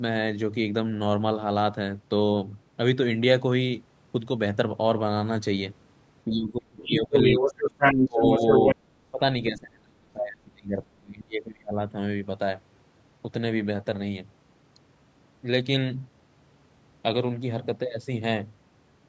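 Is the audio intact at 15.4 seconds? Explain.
Yes, the speech at 15.4 s is intact, with no dropout, click, distortion or other fault at that moment.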